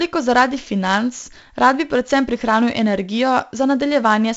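4-bit ADPCM compression runs through the whole speech clip, with heavy damage. Each sample is coded as a coarse step from a prediction, so gritty hiss rides on every loud sound. Sharp attacks distort. Nothing reaches above 7.8 kHz, which fits a 64 kbps stream.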